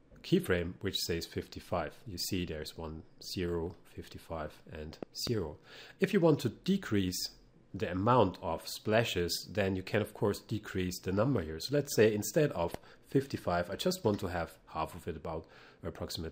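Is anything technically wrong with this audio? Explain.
Yes. Loud pops occur at 5.03–5.29 s, a close pair, and at 12.74–12.77 s, a single one. A sudden voltage pulse, likely from a plug, switch or static, is added to the signal, giving sharp thumps about 10 dB above the sound, which continues underneath.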